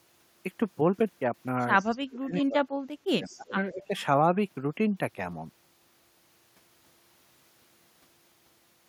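From 1.79 to 1.96 s, a faint copy of the speech returns 179 ms late, well below the talker: an echo leak, likely from a loudspeaker echo canceller letting residual pickup through. Overlapping it, from 1.85 to 3.46 s, the talker's speech dips in pieces by up to about 30 dB, totalling roughly a second. This is speech suppressed in double talk, likely because the canceller treated the overlap as echo. The echo leak returns at 3.24–3.55 s at the same 179 ms delay and slightly stronger. A shallower suppression of about 15 dB follows at 3.72–3.90 s, and a fainter echo leak at 3.82–4.01 s.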